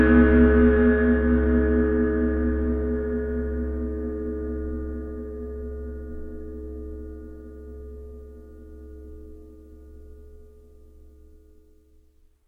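No technical faults can be heard in this recording of sounds, and the signal holds steady and intact throughout.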